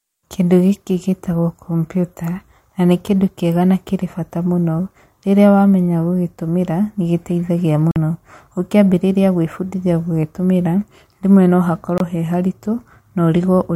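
At 7.91 s the speech cuts to silence for about 46 ms, until 7.96 s. At 11.98 s it happens again, for about 23 ms, ending at 12.01 s. Each gap starts and ends either abruptly or with a fade of a few milliseconds. The speech resumes further on, as if it had kept playing through the hole. That pattern fits a Bluetooth dropout, likely from audio packets arriving too late and being discarded. The lengths suggest two packets lost, then one.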